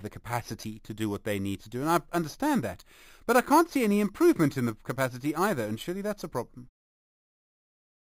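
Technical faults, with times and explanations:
Throughout, imaging from sample-and-hold upsampling: a metallic fizz at 5.5 to 11 kHz, about 19 dB down, mirrors the speech and moves against its pitch, unlike steady hiss.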